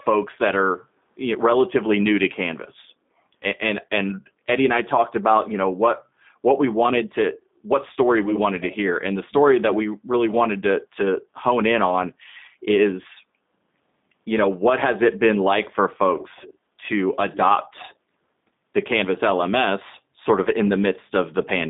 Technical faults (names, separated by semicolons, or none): G.729 codec